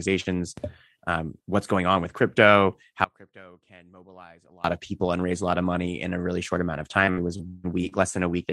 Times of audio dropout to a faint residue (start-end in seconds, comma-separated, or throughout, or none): 3.04-4.64